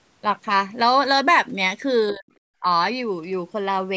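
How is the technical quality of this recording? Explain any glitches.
The speech has two brief dropouts consistent with speech suppressed in double talk. From 2.12 to 2.26 s the level falls by roughly 40 dB, nearly silencing it, and from 2.61 to 2.65 s a shallower dip of about 15 dB follows. The likely cause is an echo canceller that, with both ends talking at once, could not tell local speech from loudspeaker echo and attenuated everything. The audio reflects call microphone processing, with no content above 8 kHz.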